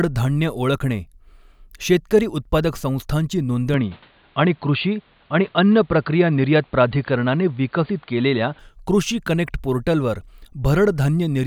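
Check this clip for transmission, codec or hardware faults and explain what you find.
One fault stands out, in the middle of the clip. From 3.74 s to 8.59 s the speech turns dull and boxy: everything above about 4.6 kHz disappears and a faint new background hiss sits well below the voice. It returns to full clarity at 8.59 s. There is no gap at either change and no obvious jump in loudness. This is likely an input switched to a poorer device, a narrower-band microphone or headset profile that carries its own tone and noise floor.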